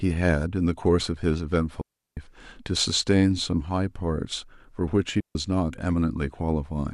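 At 1.82 s the speech cuts out cleanly for about 354 ms, until 2.17 s, then again at 5.20 s for roughly 149 ms, back by 5.35 s. Both are digital wireless dropouts: the radio link lost enough data that the receiver simply muted rather than passing garbage. You hear it as a tidy hole of near silence with a very quick fade, and no crackle or noise burst on either side.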